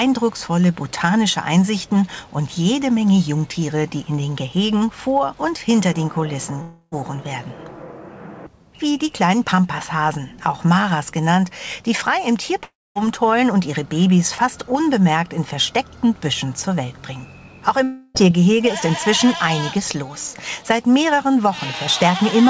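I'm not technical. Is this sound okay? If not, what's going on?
No. Three times the sound breaks off and is replaced by a buzzy, fading hiss for about a third of a second: at 6.62 to 6.94 s, 12.64 to 12.97 s, and 17.83 to 18.30 s. The second break ends in a clear quarter-second of silence. When the sound returns, a piece is missing. This is likely a long network dropout: the call connection briefly stopped delivering audio, so the receiver filled the gap and then skipped ahead.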